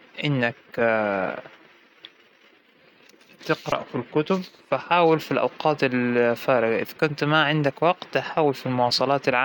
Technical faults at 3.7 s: repeated buffer

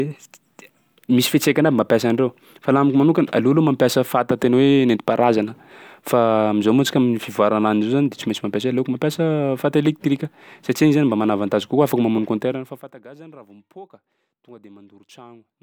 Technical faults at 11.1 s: none

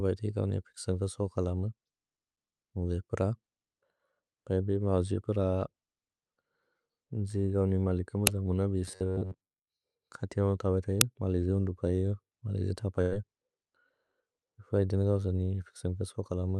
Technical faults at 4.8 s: none

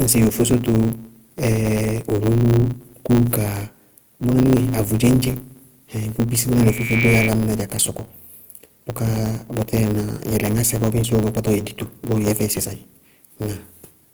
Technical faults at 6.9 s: Opus compression; block size mismatch (truncated); loudspeaker feedback squeal

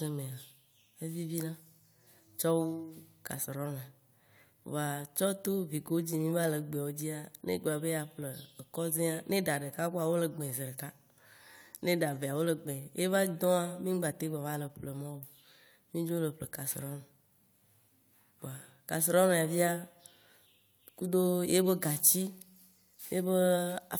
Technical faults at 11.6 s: none

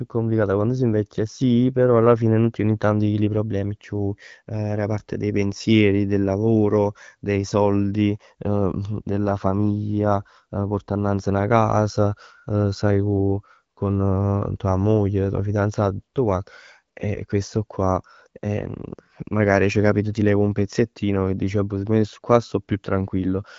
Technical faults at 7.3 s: none

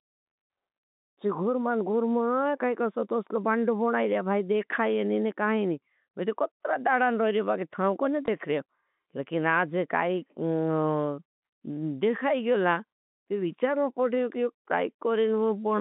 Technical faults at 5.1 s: none

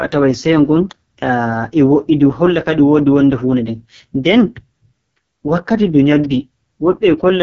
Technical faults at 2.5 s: AMR wideband (HD Voice) codec

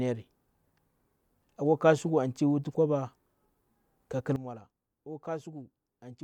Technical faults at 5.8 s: sudden gain jump

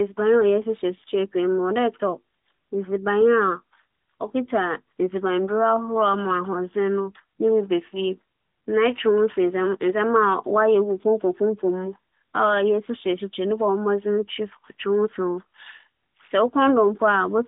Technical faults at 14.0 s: none

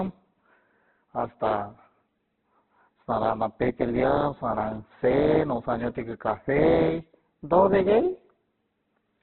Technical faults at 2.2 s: Opus compression

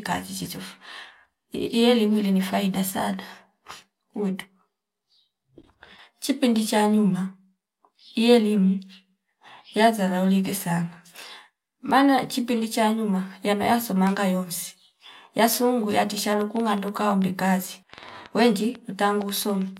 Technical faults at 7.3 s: none

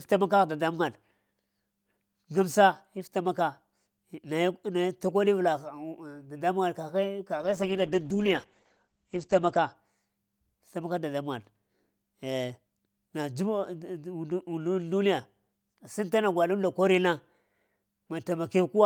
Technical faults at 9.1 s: call bitrate drop

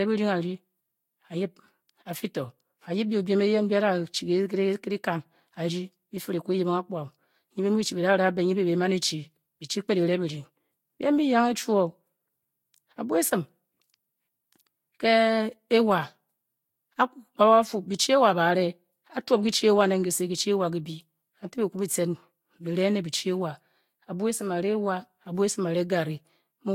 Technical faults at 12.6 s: generation loss

